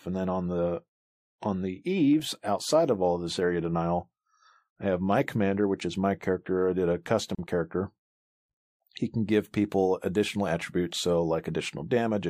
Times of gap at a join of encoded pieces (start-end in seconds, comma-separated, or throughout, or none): 7.35-7.39